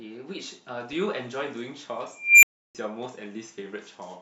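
A recursive filter went unstable at 2.16 s, its output growing without limit. In the speech, a tone around 2 kHz swells to a loud squeal over about 0.27 s, clips, then overflows into about 0.32 s of silence until the filter resets at 2.75 s.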